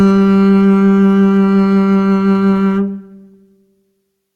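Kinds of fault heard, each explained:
No faults can be heard in this music clip. No technical problem stands out anywhere in it.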